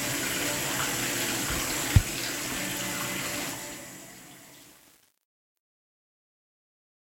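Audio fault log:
3.41–7.04 s: truncation distortion on a fade. The fade-out runs through a stage that keeps too few bits (it fits about 8-bit output) with no dither, so as the level drops from around 3.4 s the waveform collapses into coarse steps and the tail turns gritty.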